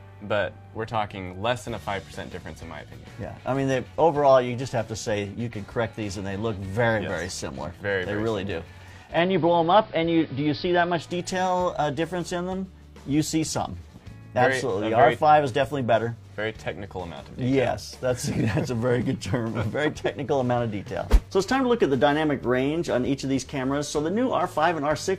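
From 9.08 s to 11.12 s the audio shows digital radio blending to analogue: the receiver loses the digital stream and cross-fades over about 148 ms to the station's AM broadcast, then back. During that stretch a hiss sits roughly 30 dB under the signal, with no change in level. A simple filter or a codec dropping bandwidth would dull the top without bringing in hiss, and would switch rather than blend smoothly in and out.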